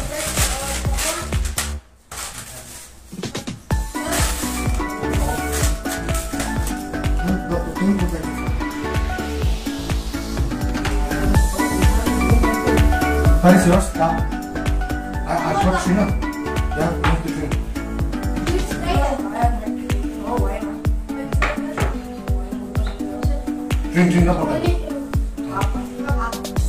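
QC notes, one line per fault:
10.87–13.98 s, digital radio blending to analogue: the receiver drops the digital stream and cross-fades over 340 ms to the station's FM broadcast, then returns. Level shifts by about 6 dB, and FM hiss appears, roughly 30 dB below the signal.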